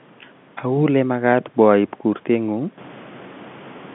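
Nothing here counts as a fault: the narrow telephone band is just the G.711 line at work, and the room noise that swells by about 12 dB around 3 s is part of the recording, still sitting about 23 dB under the speech.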